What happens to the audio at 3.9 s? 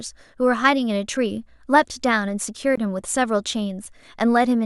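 At 3.85 s the speech drops into a block of digital silence lasting about 1.8 ms: a run of samples is replaced by silence, the gap left when an output buffer goes unfilled or a calculation yields invalid values. The waveform drops into silence and back with no fade, so the gap is too short to hear as a hole and comes across as a single tick. That hard step into silence, rather than an isolated spike or a softened fade, sets it apart from an ordinary click or a smoothed dropout.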